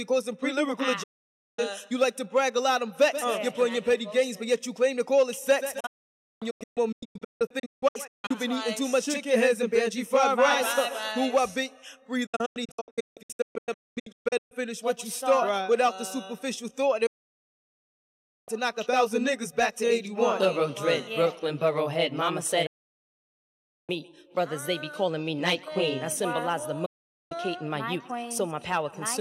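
Sound fades out within about 8 ms and goes silent at 1.03 to 1.59 s, 5.80 to 8.31 s, 12.26 to 14.52 s, 17.06 to 18.49 s, 22.66 to 23.90 s and 26.86 to 27.32 s. The second and third are broken into several short holes. This is digital broadcast dropout: the receiver muted while frames were missing or corrupt.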